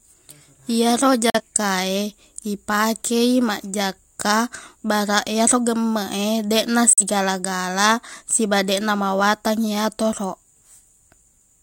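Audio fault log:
1.30–1.41 s and 6.93–7.03 s: digital broadcast dropout. The speech fades out in about 3 ms, which fits one muted, lost frame. The waveform goes flat and the spectrogram shows a vertical gap across all frequencies.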